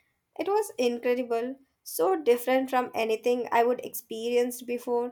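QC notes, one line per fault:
No faults heard on the speech track.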